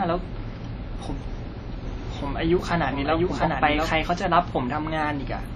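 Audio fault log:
throughout: WMA compression, likely at a low bitrate consistent with 32 kbps; nothing above 13.2 kHz, with heavy ringing, washy smearing and hiss that breathes with the signal.
1.85 to 3.93 s: doubled audio track, likely a second capture path; a full-band copy trails about 0.7 s behind, roughly 5 dB quieter, dry, starting and stopping abruptly.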